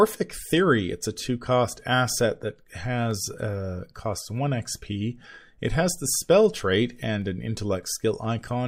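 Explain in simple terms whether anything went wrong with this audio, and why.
Something went wrong between two parts of the recording chain. The likely cause is that two devices were each keeping time with their own clock, and the two ran at slightly different speeds, off by a tiny fraction of a percent. The buffer passing sound between them slowly drifted out of step until a handful of samples had to be dropped or repeated to catch up. This is called clock drift buffer slips. In the speech, you hear it as a regular click about every 1.03 seconds, roughly seven times between 1.06 and 8.25 seconds.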